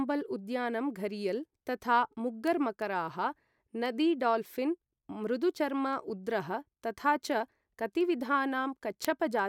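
Speech, with word clock ticks running from 0.40 to 9.39 s: sharp ticks of uneven strength about every 0.3 s, around thirty in all. The receiver's clock is drifting roughly 70 ppm off the sender's, slipping one sample each time.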